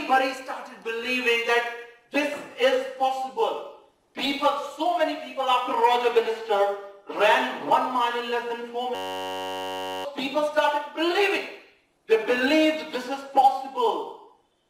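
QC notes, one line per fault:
8.95–10.05 s, system hang loop: a 10.67 ms slice repeats about a hundred times, giving a steady buzz at 93.8 Hz while the hardware kept replaying one stuck ring buffer, which fits a 512-sample buffer. Roughly a second of audio is lost.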